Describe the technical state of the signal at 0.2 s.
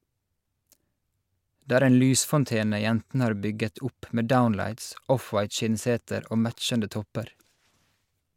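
At 0.2 s the signal is intact, with no audible fault at that moment.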